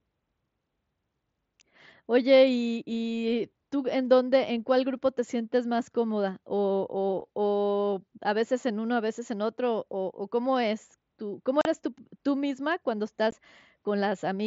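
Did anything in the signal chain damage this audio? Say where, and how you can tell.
Yes. At the Bluetooth headset link, unconcealed Bluetooth headset packet loss cuts a 38 ms hole at 11.61 to 11.66 s and a 15 ms hole at 13.31 s. The abrupt edges with nothing filled in set this apart from concealed network loss, which smears or repeats the audio. The mSBC codec carrying the speech adds only light graininess.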